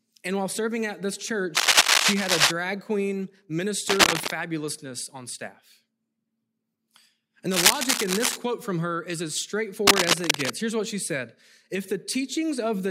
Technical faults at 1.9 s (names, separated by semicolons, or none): cable scratch noise